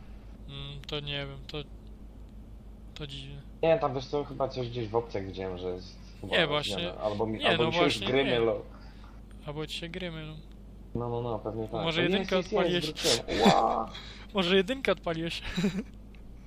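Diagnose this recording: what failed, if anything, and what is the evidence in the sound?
A repeated frame fault sits at the codec or storage stage. At 14.47 to 14.49 s the sound stutters once, replaying a 23.2 ms block, which fits a single compressed frame. The decoder played that frame twice, lengthening the audio by 23.2 ms.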